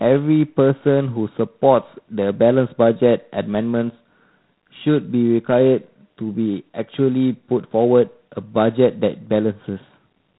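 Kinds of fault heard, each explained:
G.726 ADPCM: the speech is coded as a few bits of difference from an adaptive prediction, which at 24 kbit/s adds a harsh, rasping hiss that rises and falls with the speech level throughout. A spectrogram shows nothing above about 3.9 kHz and a grainy noise floor tracking each syllable.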